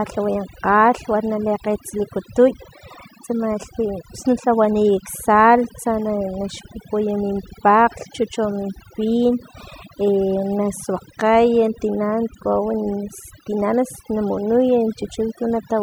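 Overdone noise removal runs throughout: the noise reduction is set too strong, cutting bands near its noise estimate, leaving twinkling near-silent gaps and taking quiet parts of the voice with them.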